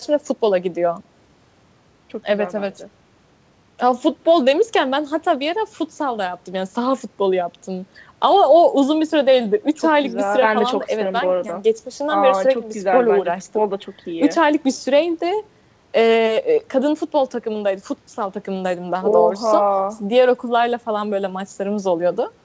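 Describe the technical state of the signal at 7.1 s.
At 7.1 s the speech signal is intact, with no fault, only the steady band limit of the G.722 call path, which leaves nothing above 8 kHz.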